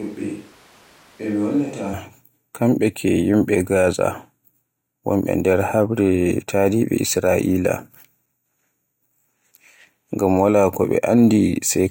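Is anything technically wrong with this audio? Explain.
Yes. From the very start up to 1.92 s, the speech sounds like it's coming through a switch to a distant microphone. It's already going when the clip begins, then snaps back to the close, full sound. For that stretch the voice is roomy and hollow, thinner in the low end, roughly 10 dB quieter, with room noise sitting only about 25 dB under it. Most likely the close mic's feed dropped out and a far-off mic covered those seconds.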